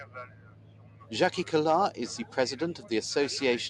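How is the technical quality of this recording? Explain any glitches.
The recording has a clear problem: a speech-style noise suppressor was left running on material that isn't speech, and it audibly chews into the sound.

Across the whole clip there's the noise suppressor applied to music or sounds. It reads anything steady, like sustained tones, ambience or tails, as background noise and pulls it down, while sharper onsets slip past. The gain swings by something like 10 dB, so the level pumps and flutters and held parts feel thin and hollow instead of sitting evenly.

The worst stretch is from 0.04 to 1.11 s, where you get sound cut by the noise suppressor. For roughly a second the processor decided this material was mostly noise and clamped it, with the deepest dip about 10 dB below where it should be. Sustained content sinks and decays get chopped short, so that opening sounds ducked and oddly gated compared with what follows.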